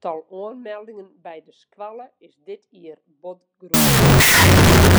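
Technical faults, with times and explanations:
3.74 to 4.98 s, wrong sample width: 16-bit samples are read as unsigned 8-bit. Mismatched bytes become loud noise, with the speech buried, half speed, an octave lower.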